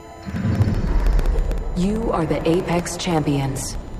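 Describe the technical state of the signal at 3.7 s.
At 3.7 s you're right inside a run of periodic USB or driver dropouts that spans 0.11 to 3.94 s. Something keeps stalling the USB transfer or the audio driver every 64 ms, and each time roughly a millisecond of audio goes missing and is replaced by silence. So you hear a steady stream of small ticks, about 15 a second, whenever there's signal to interrupt.

Under that there's a USB whine at 1 kHz, about 30 dB below the signal, present for the whole clip. That's current drawn in the bus's 1 ms frames leaking in through power or ground, which gives you a thin, fixed-pitch tone that doesn't move with the material.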